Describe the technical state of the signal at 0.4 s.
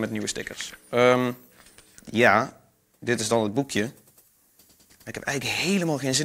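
At 0.4 s the signal is intact, with no dropout, clipping, distortion or other audible fault at that point.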